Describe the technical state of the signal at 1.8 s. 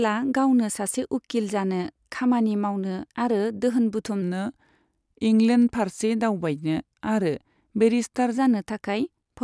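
At 1.8 s the speech signal is intact, with no audible fault at that moment.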